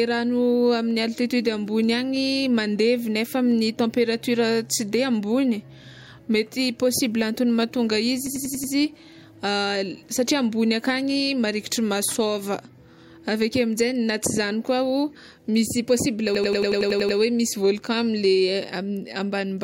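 At 8.27 s the speech locks into a system hang loop until 8.73 s. The system stalled while the sound hardware kept replaying one 93 ms slice, which fits a 4096-sample buffer. That slice repeats five times, a machine-gun stutter at 10.8 Hz. The same loop returns from 16.35 to 17.18 s, repeating nine times.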